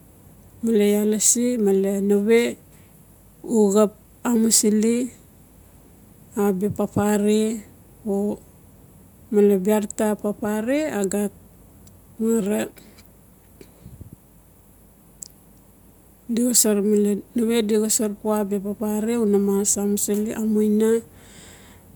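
Nothing stood out as a technical fault on listening to this recording of speech.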